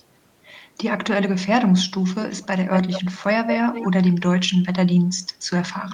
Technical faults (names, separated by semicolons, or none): echo leak